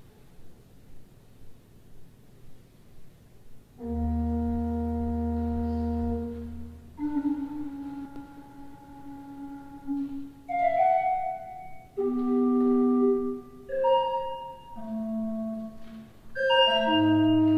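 The signal shows no audible technical faults anywhere in its duration.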